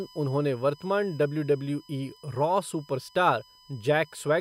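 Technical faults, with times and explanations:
Throughout, USB whine: a steady, fixed-pitch tone sits under the speech, built on 1 kHz with its strongest component at the 5 kHz multiple, and it stays roughly 30 dB below the speech. The bus works in 1 ms frames, so the current it pulls rises and falls a thousand times a second. That ripple leaks through shared power or ground into the audio path and is heard as this whine.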